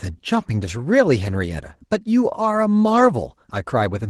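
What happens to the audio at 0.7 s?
At 0.7 s the speech carries Opus voice compression, present throughout. At about 16 kbps, hybrid coding quantizes the excitation coarsely. The speech sounds hoarse and slightly robotic.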